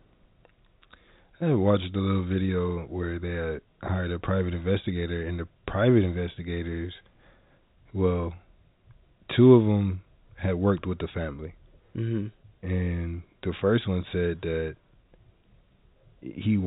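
No technical faults are audible.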